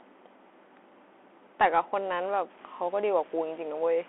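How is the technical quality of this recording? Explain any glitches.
The recording has narrowband headset coding throughout and grainy distortion near the end.

Throughout, a Bluetooth CVSD headset codec cuts everything above 3.8 kHz, making s sounds scratchy over granular hiss; unlike plain lowpassing, it hisses and distorts.

From 2.58 s to the end, quiet passages turn gritty, with distortion about 25 dB below the signal that follows it, likely low bit depth without dither, near 7 bits truncated, unlike steady hiss.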